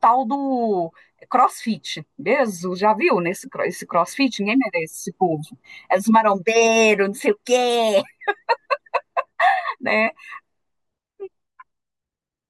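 A short speech recording with no technical fault to report. Nothing in its signal chain calls for correction.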